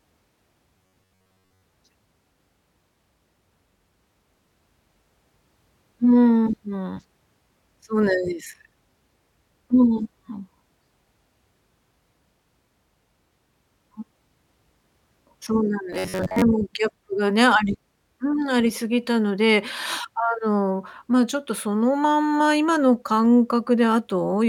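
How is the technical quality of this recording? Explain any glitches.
The recording has two glitches. From 0.78 to 1.62 s and 15.93 to 16.44 s, the speech turns into a robotic sound from repeated short buffers, a rigid metallic buzz at about 94 Hz. The likely cause is audio arriving too seldom, so roughly 11 ms chunks repeat for most of each stretch. A waveform shows identical repeating cycles, and a spectrogram shows evenly spaced harmonic lines at 94 Hz.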